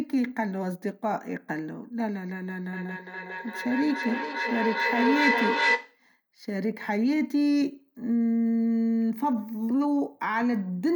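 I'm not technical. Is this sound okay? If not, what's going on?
No. From 2.73 to 6.05 s there is feedback echo between two devices: speech returns roughly every 0.4 seconds as distinct, ringing copies that build up to full loudness, unlike room reverberation, which only blurs.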